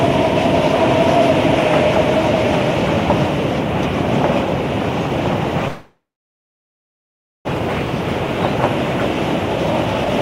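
A recording of everyday sounds with two network faults. From 5.68 to 7.53 s the audio cuts out. The last sound fades into silence, likely a long network dropout, and about a second never returns. From 9.56 to 10.10 s a jitter buffer speed-up plays sound 19% fast at unchanged pitch, trimming roughly a tenth of a second.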